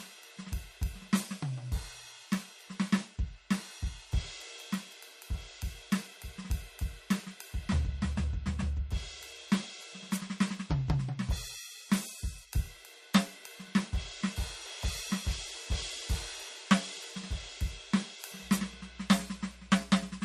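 From the start of the music to the end, nothing is heard above 14.1 kHz, and the top end carries the swirly, smeared texture of heavy perceptual coding. This points to low-bitrate audio saved at a high bitrate, most likely an MP3 at roughly 38 kbit/s that was later re-encoded to a much larger MP3, around 256 kbit/s. The second pass keeps everything the first one damaged; it cannot restore the removed high frequencies or clean up the artefacts, so the bigger file sounds no better.

At 18.41 s a mains hum enters and lasts to the end of the clip: a steady 60 Hz tone with some low harmonics, sitting roughly 20 dB below the music. Power-line energy has coupled into the signal path, typically through a ground loop or a nearby transformer, and it stays constant underneath the material until the recording stops.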